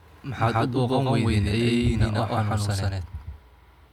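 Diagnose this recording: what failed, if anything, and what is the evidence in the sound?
Doubled audio track throughout: an equal-level, full-band copy trails roughly 150 ms behind without decay, unlike echo, likely from a second, slower capture path.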